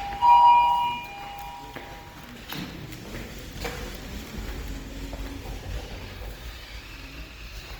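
Opus compression is plainly audible throughout: tonal parts turn grainy and rough, with noise filling thin bands, which points to a low-bitrate music-mode encode, likely around 24 kbps.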